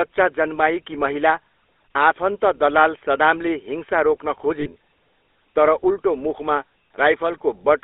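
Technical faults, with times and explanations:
Throughout: GSM full-rate codec. The speech has that buzzy, gravelly GSM roughness, because the vocal tract is modelled and fed with sparse regular pulses at about 13 kbps. The line band sits around 300 Hz to 3.6 kHz, so it sounds thin and boxed-in, and the damage is plainly audible.
4.60–4.68 s: lost GSM frames, right after "दलाल सदामले हिंसा रोक्न". For roughly 60 ms the decoder keeps reusing the last good frame's settings. That gives a short metallic, ringing smear where the speech should carry on, which points to about three dropped frames.
6.88 s: sudden gain jump, just after "तर उल्टो मुखमा". The level falls by about 14 dB in a single step, with no ramp, and the speech and background noise drop together. That's most likely a digital gain setting applied instantly rather than faded in.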